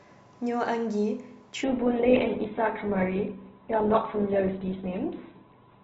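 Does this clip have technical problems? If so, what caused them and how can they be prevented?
Yes. From 1.64 s to the end, the speech abruptly turns dull and thin, with nothing above about 4.1 kHz and a grainy, synthetic edge where codec artefacts rise. There is no gap at the switch. This is an adaptive stream at a lower bitrate. When the connection slowed, the player swapped to a much leaner encoding of the same audio, which fits a drop from Opus at around 64 kbit/s to roughly 8 kbit/s. To prevent it, secure steadier bandwidth or set a higher minimum bitrate with more buffering so the player isn't forced onto the lowest rendition.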